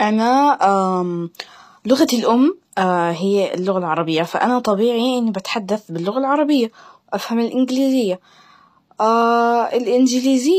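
A speech clip with plainly audible HE-AAC compression damage throughout: the treble sounds synthetic rather than natural, s sounds turn gritty and lispy, and nothing remains above 14.9 kHz. This is likely spectral band replication rebuilding the top end from lower bands, consistent with a low bitrate around 24 kbps.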